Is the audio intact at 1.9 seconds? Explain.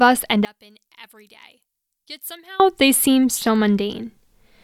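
No. At 1.9 s the speech nearly vanishes, dropping about 24 dB from 0.45 to 2.6 s. Likely one channel inverted: centred speech cancels in mono, leaving a faint residue.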